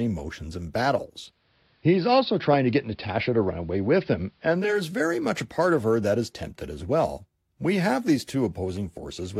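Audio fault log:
1.13–4.91 s, digital radio blending to analogue: after "emotions and" the receiver drops the digital stream and cross-fades over 459 ms to AM, so faint hiss sits roughly 45 dB down, and level shifts about 2 dB, returning before "very much a part".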